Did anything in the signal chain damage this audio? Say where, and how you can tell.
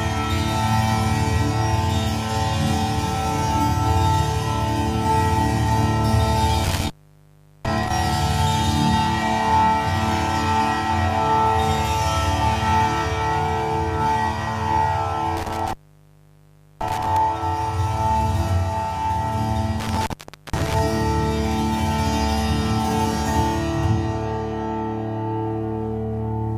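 Yes. Crackly dropouts at 6.64–7.90 s, 15.37–17.17 s and 19.80–20.79 s: an intermittent contact in the analogue wiring, a loose plug briefly opening the line.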